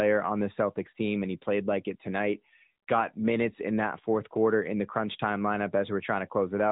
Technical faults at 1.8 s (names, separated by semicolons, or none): AMR narrowband mobile codec